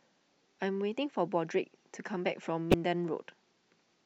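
Damaged data in a compressed stream breaks the speech twice. At 0.59 s corrupted data makes the decoder misread a frame, producing a very brief blip. From 2.70 to 2.74 s a longer stretch of bad data throws the decoder out of sync while it hunts for the next valid frame header, and the speech breaks off briefly before normal decoding resumes.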